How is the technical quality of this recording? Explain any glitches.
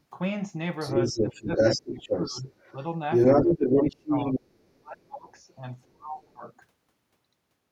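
The recording has two related faults from a speakerphone-style echo canceller: the far end's voice leaks through, and the talker is repeatedly turned down while both sides speak.

Other side's voice leaking through, from 0 to 0.04 s, 0.79 to 4.79 s and 5.35 to 5.4 s: the loudspeaker's output most likely reached the microphone and was not fully cancelled. The two short traces are barely audible, far below the talker. The long stretch is a second voice that is actually louder than the talker, by roughly 10 dB.

Speech suppressed in double talk, at 1.13 to 2.45 s, 3.73 to 4.45 s and 4.8 to 6.44 s: the canceller likely could not separate the near talker from the echo when both spoke, so it attenuated everything. The talker's voice dips in patches totalling under a second, around half a second and about a second. The first two drops are around 15 dB, and the last is much deeper, around 30 dB, leaving the voice nearly gone in places.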